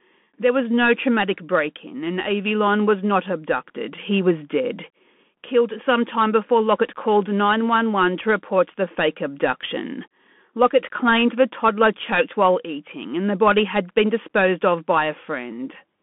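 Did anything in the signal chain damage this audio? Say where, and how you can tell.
Yes, at the codec stage: the speech went through a Bluetooth CVSD headset codec, consistent with a 64 kbps CVSD link. Throughout, nothing passes above about 3.8 kHz and the band sits near 200 Hz to 3.4 kHz. The one-bit slope tracking adds clearly audible granular hiss and roughened sibilants.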